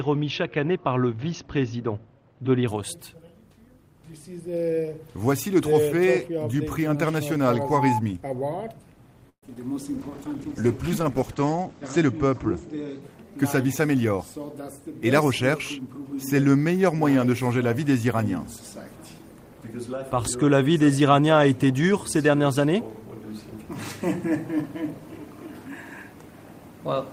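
At 9.29 s the audio stalls for about 0.13 s in a call audio freeze. The stall is most likely from packets held up in transit, which let the jitter buffer run dry. The receiver briefly stretches the last sound, and that fades to silence for roughly 0.1 s. When the sound resumes at 9.43 s it picks up exactly where it stopped, with nothing skipped. That distinguishes a freeze from loss: the gap adds delay rather than removing any audio.

Right after it come two short concealed packet losses, at 9.46–9.49 s and 9.55–9.57 s. In each, about 20 ms of audio never reached the decoder in time, and the receiver papered over the hole by extending the preceding sound before blending back in. They come across as quick smears or wobbles rather than a pause. Unlike the freeze, these do remove material: those few hundredths of a second are gone, not merely delayed.

From 9.99 s to 13.08 s there is a call bitrate drop. 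The encoder was pushed from 32 kbps down to 14 kbps, and it sat at the lowest rate for about 2 s. At that rate the coded bandwidth shrinks from 20 kHz to 8 kHz, so the top end disappears and the sound turns muffled and somewhat watery. It differs from the packet faults by lasting seconds with no gaps or glitches at all, just a steady loss of detail until the rate recovers.

From 13.37 s to 14.93 s a jitter buffer speed-up follows. The buffer had filled past its target, so the receiver trimmed out short pitch-period slices repeatedly, removing around a tenth of a second in total. The audio plays at about 107% speed while its pitch stays unchanged, giving a slightly hurried feel. That unchanged pitch is the tell: a simple faster playback would raise the pitch, whereas here only the timing tightens.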